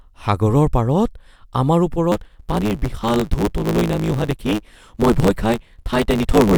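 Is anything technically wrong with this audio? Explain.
Yes. From 2.11 s to the end at 6.57 s, the speech shows a block size mismatch (truncated): the reading stage drops the tail of each longer written block, which fits 512-sample writes. This produces a 109 Hz buzz, and the speech runs about 1.16 times fast with its timbre kept.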